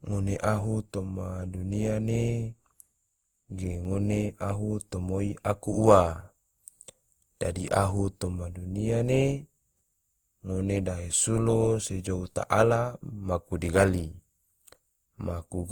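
Speech, and the whole clip has that swirly, hollow quality of generation loss, with consonant attacks blurred and smeared. It sounds worse than a single 48 kbit/s Opus pass would, so it was likely re-encoded around five times, each pass stacking fresh quantisation noise.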